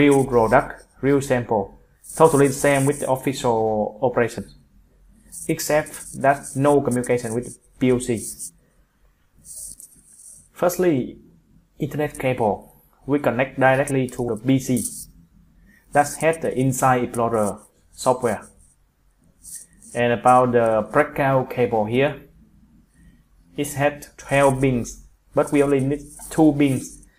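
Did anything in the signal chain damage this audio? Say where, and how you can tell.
Yes. Two abrupt skips at 14.28 s and 19.23 s each lose about 50 ms, with the edges joined and no silence between. The regular spacing points to audio missing between chunks, likely from a recorder buffer handing over 5-second blocks.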